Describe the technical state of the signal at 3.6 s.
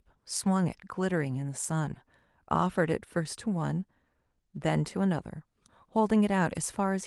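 At 3.6 s the speech comes through intact, carried by the call codec and jitter buffer without any dropout, glitch or distortion at that moment.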